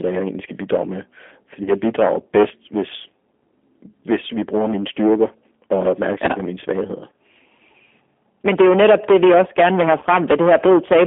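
From start to finish the speech is hard clipped, driven about 13 dB past full scale so that around 7 percent of samples sit at the limit. Peaks are sheared flat, adding harmonics far up the spectrum and a harsh fuzz on every loud syllable. On the waveform the tops look like a flat-topped block, and the spectrogram shows smeared broadband energy on each loud syllable.

The whole clip also passes through a G.729 codec, and the damage is plainly audible. A synthetic, slightly rough quality fits an 8 kbit/s G.729A link. The spectrogram shows a band from 250 Hz to 3.5 kHz, with nothing below or above, and the harmonics look blurred.

At 1.64 to 1.72 s and again at 9.99 to 10.05 s, VoIP packet loss concealed by the speech codec breaks in. About 30 ms of audio is missing each time, which fits a single lost packet. The decoder stretches its last pitch and filter into a brief buzzy, fading tone, and the sound stays weak for a moment afterwards. 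On a spectrogram this appears as flat, repeated harmonic stripes that fade. The waveform shows a short run of identical, shrinking cycles.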